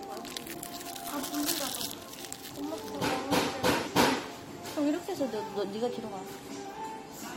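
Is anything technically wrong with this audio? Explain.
Yes. At 3.86 s the sound briefly lurches forward, dropping roughly 50 ms: compressed frames were skipped, so the audio jumps ahead by the length of the frames left out.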